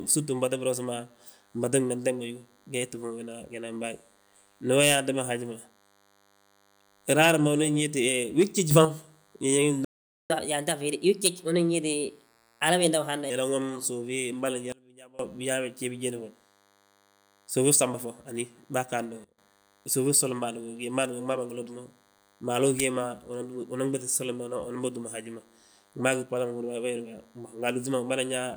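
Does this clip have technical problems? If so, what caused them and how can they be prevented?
Yes. A thin, steady buzz at 100 Hz, rich in harmonics, runs under the speech for the whole clip, about 35 dB below it. This is DECT cordless phone buzz: a nearby handset or base station transmits a burst every 10 ms, and the audio circuitry rectifies those bursts into sound. Keeping DECT bases and handsets well away from microphones, cables and interfaces, and using shielded balanced wiring, prevents it.

There are three sudden gain jumps. At 8.71 to 8.85 s the speech and background noise leap up by about 6 dB together. At 14.72 to 15.19 s, right after "suufi mboli", they drop by about 24 dB. At 19.24 to 19.38 s, just before "suufi fsoli", they drop by about 20 dB. Each is likely a digital gain change applied instantly, with no ramp. Smoothing every gain change over a few milliseconds prevents these steps.

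From 9.85 to 10.30 s the speech cuts out into silence for about 0.45 s and then resumes. This playback stall likely came from the player running dry of data or having its audio thread blocked. A larger playback buffer and an audio thread that nothing can block would prevent it.

Right after that, from 10.30 to 13.30 s, the speech runs 1.15 times too fast and sounds about two semitones higher before settling back. This is catch-up at higher speed, where the player resamples its backlog to recover lost time. Using pitch-preserving time-stretching, or simply skipping ahead, prevents the chipmunk effect.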